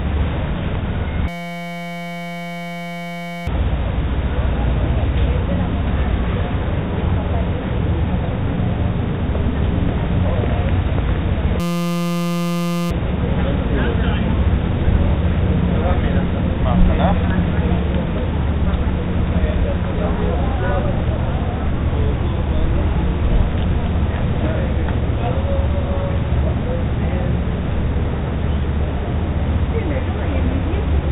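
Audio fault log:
1.28–3.47 s and 11.60–12.91 s, system hang loop: the machine stalled while the audio hardware kept replaying one 5.8 ms slice of its ring buffer, which fits a 256-sample buffer. At 172 Hz that becomes a steady buzz, and it wipes out about two seconds, then another second and a half.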